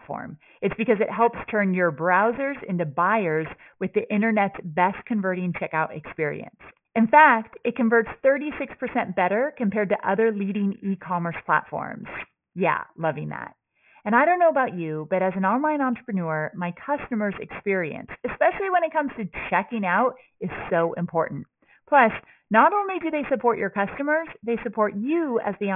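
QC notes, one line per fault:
Throughout: aliasing. The speech has a gritty, metallic edge, worst on sibilants. Nothing reaches above 3 kHz, and the spectrum runs hard up to that edge. This fits a drop to a 6 kHz sample rate with no filter first. Energy above 3 kHz was not removed. It folded back below the edge as false, unrelated tones. These sit around 20 dB under the speech. They blend in as harsh, unnatural grain.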